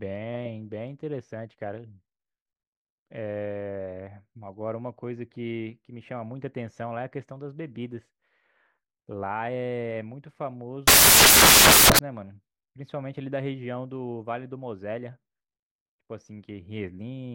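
At 10.88 s the speech suddenly drops into a wall of harsh, loud broadband noise that runs until about 11.99 s, a little over a second. That's samples built from the wrong bytes: the reader has misassembled each sample, whether by being a byte off, swapping the byte order or misjudging alignment, so the jittery low bits end up as the big part of every value. Anything meaningful turns into noise.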